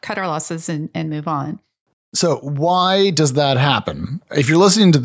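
From 2.2 to 3.91 s the automatic gain control judged the input too quiet and lifted its gain by about 4 dB. This automatic gain rising makes the voice and background noise swell together gradually, so the whole sound grows louder across that stretch.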